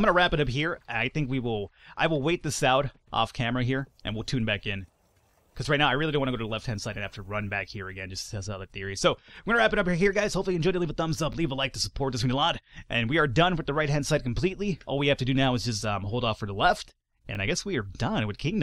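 Overlapping chunks: the audio was handled in 6-second blocks, each starting 20 ms before the previous one ended, so that stretch plays twice at the joins from 11.33 to 11.35 s and from 17.35 to 17.37 s, each heard as a brief stutter or click.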